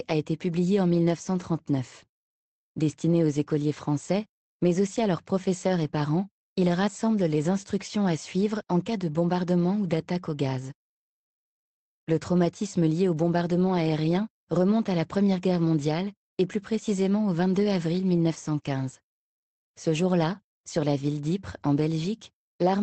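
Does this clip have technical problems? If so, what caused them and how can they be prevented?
Yes. A lost packet rebuilt from error correction sits at 17.39 to 17.41 s. The Opus decoder filled the 20 ms hole with the low-bitrate copy carried in the next packet, so nothing drops out, but that stretch sounds briefly rougher and noisier than the surrounding 24 kbps, 8 kHz-band call audio. Preventing it means reducing packet loss on the network path, for example with a wired or less congested connection.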